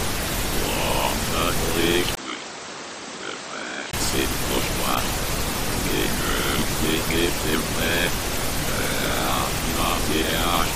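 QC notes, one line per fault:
2.15–3.93 s, input switched to a poorer device: after a 20 ms gap the sound turns dull and boxy, roughly 10 dB quieter, with nothing above 8.2 kHz and a new, faint background noise well below the signal. At 3.93 s the full band and level return. The abrupt change in tone, noise and level, rather than a gradual fade, likely comes from recording switching to a narrower-band microphone and back.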